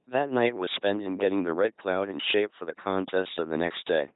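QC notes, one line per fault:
Throughout, LPC-10 vocoder: heavy damage. The speech is resynthesised through a short all-pole filter driven by either a pulse train or noise, giving a buzzy, robotic tone with misplaced buzz or hiss. Nothing is present above 3.9 kHz, which fits a 2.4 kbit/s stream.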